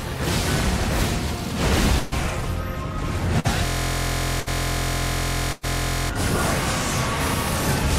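Burst of packet loss at 1.99 to 2.14 s, 3.40 to 3.46 s, 4.40 to 4.48 s and 5.52 to 5.65 s: late or lost packets left gaps of 121, 49, 60 and 106 ms. The receiver stretched and faded the last sound across each gap, then resumed with 120, 40, 60 and 100 ms of audio missing.

System hang loop from 3.66 to 6.10 s: a stalled system left the hardware replaying one 23.22 ms piece of its ring buffer, which fits a 1024-sample buffer. Repeated 105 times, it forms a steady buzz at 43.1 Hz.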